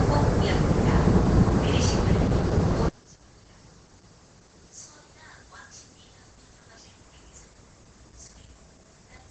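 A short recording of everyday sounds with two problems stacked on top of each other. The whole thing has heavy Opus compression damage. Nothing reaches above about 8.8 kHz, and the texture is muffled and hoarse in the way you get when the encoder drops into its speech-oriented SILK mode, which most likely points to a bitrate of around 12 kbps. Instead of swirly holes, everything comes out muffled, and the top end is simply gone. Then from 2.89 s to the end, the level collapses by about 28 dB and what's left sounds faint. That most likely points to one channel inverted. With one side's polarity flipped, the material common to both channels cancels out in the mono sum, leaving only a faint trace of whatever differed between left and right.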